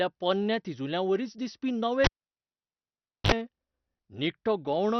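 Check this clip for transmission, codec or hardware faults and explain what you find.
Two faults are audible: low-rate MP2 compression throughout, and a cable pulled and plugged in.

Throughout, likely MP2 compression: the codec starves the upper sub-bands of bits, leaving dull, gurgling, granular speech with nothing above 18.9 kHz, which fits roughly 48 kbps.

From 2.04 to 3.32 s, just after "पोरण्या तिजुल्यांवरीच दिसपी नवे", a cable pulled and plugged in breaks the signal. A pop opens about 1.23 s of near silence, then about 49 ms of 50 Hz mains buzz, and another pop as the speech returns.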